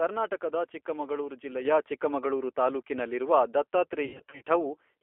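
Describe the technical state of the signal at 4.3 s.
At 4.3 s you're right in the middle of VoIP packet loss concealed by the speech codec, running from about 4.05 to 4.43 s. Packets go missing in scattered bursts, adding up to roughly a quarter of a second gone across that stretch, with the longest gap around 90 ms. The decoder fills each hole by carrying on from its last pitch and vocal-tract settings while turning the gain down, so the speech smears into a buzzy tone or coloured noise that fades. Because each frame leans on the one before, it stays weak and a bit mangled even where packets do arrive.

Underneath that, the whole clip carries the G.729 codec sound, so it's present at 4.3 s too. The speech is squeezed into a 300 Hz to 3.4 kHz telephone band and rebuilt from a filter, a pitch predictor and a handful of pulses per frame, which fits an 8 kbit/s low-complexity G.729A encoder. 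The result is plainly rough and slightly synthetic.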